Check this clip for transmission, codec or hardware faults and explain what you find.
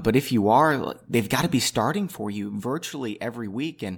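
There's one fault, zipper noise, from 1.54 to 2.89 s in this speech. The level drops by roughly 10 dB, but instead of gliding down it moves in 3 dB jumps, about two a second, with nothing smoothing the transitions. Every jump is a sudden discontinuity in the waveform, so it clicks, and you hear a faint ticking riding on the voice for as long as the fade runs.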